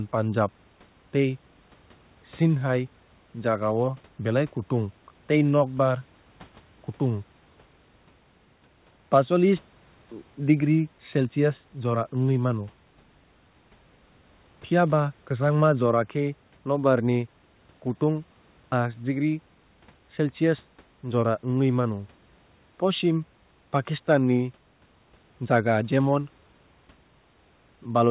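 No technical fault can be heard in this speech clip. The audio stops at 4 kHz, which fits a narrowband call path such as G.711 mu-law at 64 kbps, and the room's background noise sits about 37 dB below the speech.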